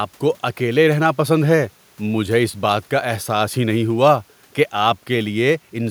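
No faults are audible anywhere in the recording.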